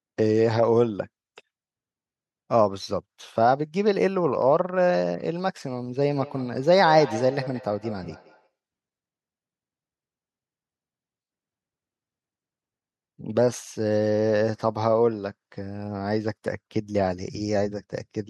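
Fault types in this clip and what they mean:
Feedback echo between two devices: Two devices in the same room are on one call. One plays out what the other's microphone sent, and that microphone picks it up again. Each device's echo canceller removes only its own playback, so the loop goes unchecked. From 6.03 to 8.52 s the speech comes back at a steady gap of about a fifth of a second. The loudest return sits about 13 dB below the speech.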